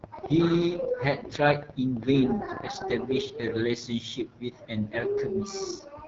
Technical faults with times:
0.00-6.07 AMR wideband (HD Voice) codec
0.04-3.45 train of clicks

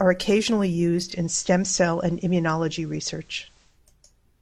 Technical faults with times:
0.96-3.80 digital radio blending to analogue

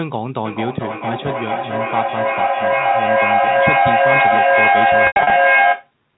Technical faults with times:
0.45-5.94 feedback echo between two devices
5.07-5.31 packet loss with pitch repetition

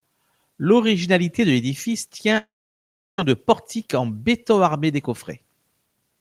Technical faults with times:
2.37-3.19 long network dropout

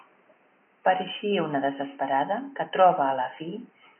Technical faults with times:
none

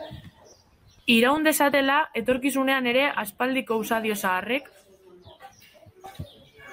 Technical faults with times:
1.33-1.37 DAB burbling
6.06-6.50 DAB burbling

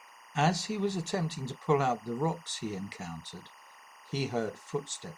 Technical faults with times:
0.00-5.17 timecode bleed

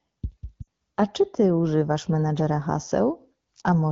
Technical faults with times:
0.62-0.68 lost AMR speech frames

